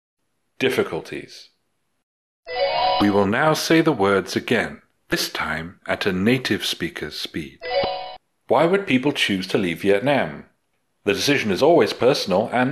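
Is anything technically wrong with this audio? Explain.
Yes. Damaged data in a compressed stream causes brief glitches at 2.98, 5.10, 7.81 and 12.01 s. Corrupted frames throw the decoder out of sync, producing short chirps or squawks.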